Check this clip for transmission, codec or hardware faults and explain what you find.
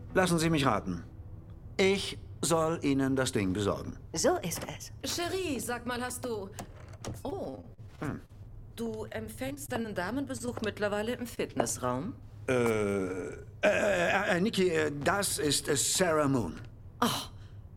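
Transmission faults are audible: two choppy, robotic stretches, two brief smears just after them, and one short held sound, all caused by packet trouble on the network path.

From 7.29 to 8.46 s, and again from 9.08 to 9.86 s, the sound turns choppy, with small pieces missing. This is repeated packet loss. Packets kept failing to arrive, and the receiver bridged each hole by extending the last sound before the next hole came. The first stretch has twelve holes, the longest 43 ms, with about a fifth of it synthesised. The second has six holes, the longest 27 ms.

At 10.37 to 10.42 s and 10.46 to 10.49 s there are two quick smears or wobbles, and a short sound may drop out. Each is a short concealed packet loss. About 20 ms of audio never reached the decoder in time, so the receiver filled roughly 17 to 26 ms by continuing the preceding sound, then faded back into real audio.

Around 11.35 to 11.39 s a sound is held slightly too long, with a faint buzz or dip. 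This is a short stall from a late packet. The jitter buffer ran dry, so the receiver stretched the last sound for about 18 ms until the packet arrived, then resumed where it left off. Nothing is missing, but timing shifts by about 18 ms.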